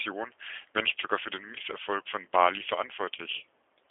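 From start to end, the speech carries G.729 codec damage: 8 kbit/s model-based coding leaves nothing above 3.5 kHz, so the sound is narrow, rough and plainly synthetic.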